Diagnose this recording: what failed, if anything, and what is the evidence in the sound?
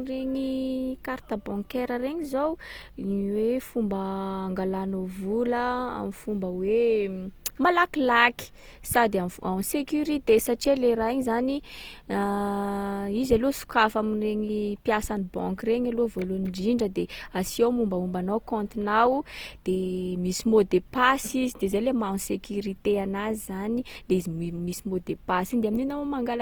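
The codec stage failed throughout the speech. The sound is rough and grainy, with noisy fill replacing fine detail, yet the band still reaches about 20.1 kHz. This is likely Opus compression in music mode, fitting about 24 kbps, filling starved bands with noise.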